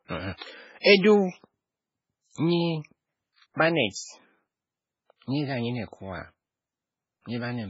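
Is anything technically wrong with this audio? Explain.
Yes, there are two faults.

Throughout the speech there is MP3 compression, likely from heavy encoding at a very low bitrate, something like 16 kbps. Nothing survives above 7.6 kHz, so the sound is dull and watery, with swirling s sounds as weak frequency lines switch on and off between frames. A spectrogram shows a hard ceiling and patchy, flickering upper bands.

From 0.98 to 1.04 s there is pre-echo, a 57 ms smear of hiss just before an attack. The coding noise sized for the loud onset spreads across the whole block, into the quiet moment ahead of it. The waveform shows noise before the transient.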